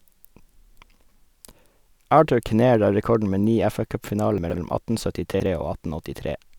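At 4.38 to 4.56 s and again at 5.34 to 5.46 s, the speech jumbles briefly: chunks out of order, 60 ms pieces played late, by two chunks then one. Unlike a dropout or repeat, no sound is missing or doubled. It is only reshuffled, with hard joins.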